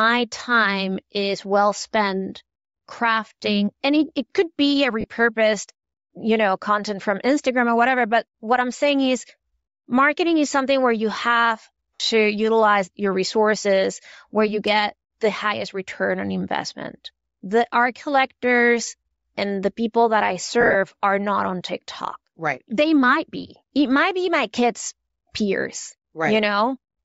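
Throughout, the speech has a breathy, grainy upper band, likely Bluetooth LC3 compression at around 32 kbps in 10 ms frames, with the highs filled by noise. Lost LE Audio frames smear the sound into noise for 30 ms at 5.01 s after "it could be a" and for 50 ms at 11.96 s between "something where you have" and "to utilize your resources". From 20.61 to 20.76 s, between "the people that I" and "are not on", 90 ms of dropouts are scattered over 140 ms, the longest run about 50 ms.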